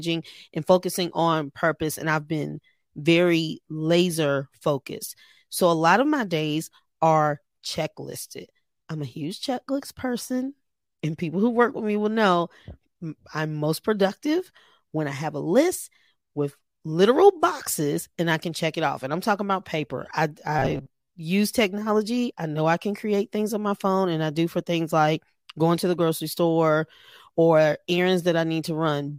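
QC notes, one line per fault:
20.59 to 21.08 s, robotic sound from repeated short buffers: right after "talking about paper I" the speech turns into a stiff metallic buzz at 133 Hz until "use technology I know" picks up. Likely the audio was arriving too slowly, so the player kept looping a tiny chunk of about 7.5 ms for most of that half-second instead of playing new sound. That loop rate is what sets the buzz at 133 Hz, while the sound follows the original speech only roughly.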